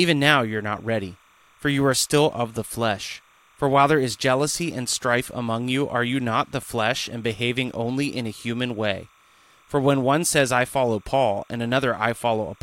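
Linear timecode from a neighbouring track or cable has leaked into the signal path for the whole of this speech clip, a case of timecode bleed. The code is a square wave flipping between two frequencies, here around 1 and 2 kHz, and its word repetition fits 29.97 frame-per-second code. It sits roughly 35 dB below the speech, heard as a faint, steady chirping warble running behind it from start to finish.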